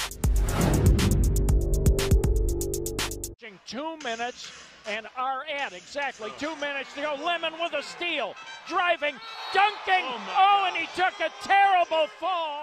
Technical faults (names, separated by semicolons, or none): none